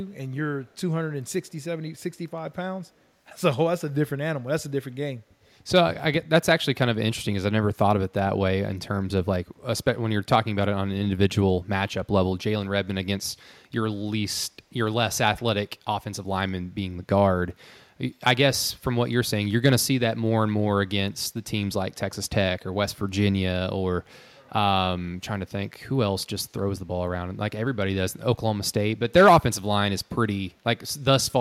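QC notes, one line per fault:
0.67–0.78 s and 1.31–1.51 s, echo leak: the far end's echo canceller likely let part of its loudspeaker pickup through, so a very faint copy of the speech returns 144 ms late, heard as brief ghostly scraps trailing the talker.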